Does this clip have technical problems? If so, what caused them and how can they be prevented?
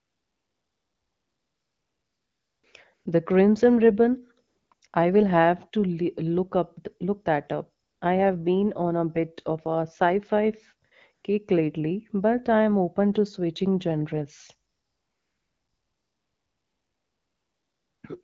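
Yes. AMR comfort noise appears nine times between 0 and 18.03 s, longest from 0 to 2.63 s and 14.71 to 18.03 s. There are also 20 to 240 ms gaps mid-clip, such as just before "I will have to" and after "up look that up". In each gap the phone treated the sound as silence and stopped sending speech frames. The receiver then filled in smooth synthetic noise, which appears as flat, uniform spectrogram bands and an even waveform floor that switches on and off abruptly. Disabling discontinuous transmission or making the voice activity detector less aggressive would prevent this.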